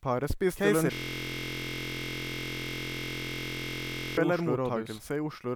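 Throughout the speech, every syllable returns about a second later at roughly the same loudness, full-band and dry, with no room tail, so the clip sounds like two identical recordings laid over each other out of step. This doubled audio track is likely the result of the same signal being captured a second time through a slower path, or an edit that left two copies offset by about a second rather than one.

From 0.94 s to 4.17 s, a steady buzz at 43.1 Hz replaces the speech. This is a system hang loop: one 23.22 ms fragment repeats exactly, well over a hundred times in a row. That length fits a 1024-sample buffer. The computer or driver stopped supplying new audio, but the sound hardware kept cycling through the same ring buffer. Because the repeated piece is so short, the listener hears a continuous buzz at the loop rate rather than a stutter.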